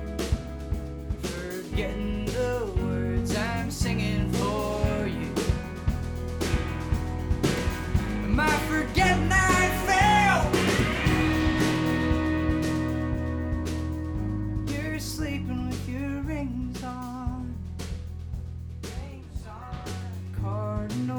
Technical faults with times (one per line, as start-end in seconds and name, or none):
none